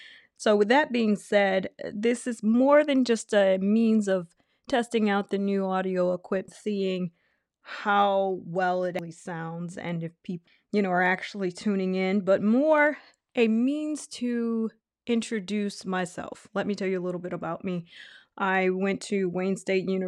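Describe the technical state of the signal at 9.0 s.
At 8.99 s, compressed frames are skipped: roughly four frames of 92.9 ms, about 400 ms of speech, are jumped over. Clock slip clicks also run through this moment, spanning 0.11 to 20.07 s, with one sample dropped or repeated roughly every 30 ms, heard as a faint soft rattle, likely from unsynchronised clocks differing by around 700 ppm.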